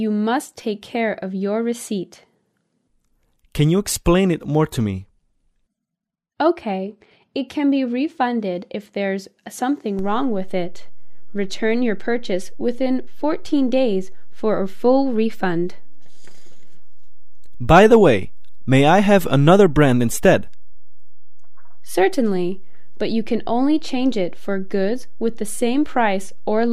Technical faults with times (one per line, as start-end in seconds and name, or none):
9.99-26.73 DC step